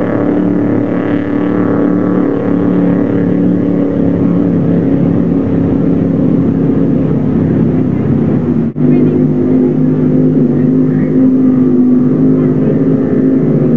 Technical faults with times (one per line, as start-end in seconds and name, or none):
none